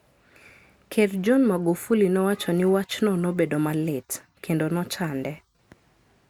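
Speech recording, no technical faults detected on listening.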